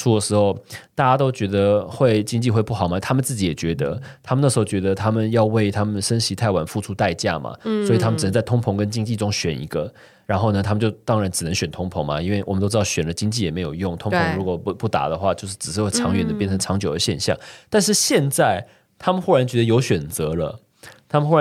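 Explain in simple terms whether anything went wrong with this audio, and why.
Nothing went wrong here; the speech sounds as it should.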